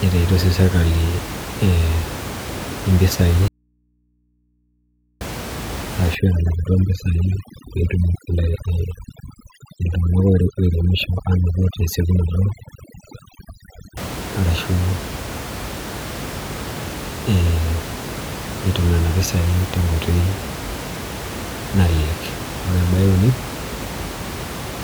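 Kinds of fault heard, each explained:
Audio dropout to a faint residue: from 3.48 to 5.21 s the speech cuts off abruptly for about 1.7 s, leaving only mains hum far below the signal, roughly 45 dB down, likely a break in the feed with the input still open. The waveform collapses to a thin flat band, and the spectrogram shows only low hum lines.
Overdone noise removal: between 6.15 and 13.97 s, noise reduction set too hard makes the background drop and break up into twinkling specks. On a spectrogram, the quiet regions become dark with scattered isolated dots and the weaker speech detail is eaten away.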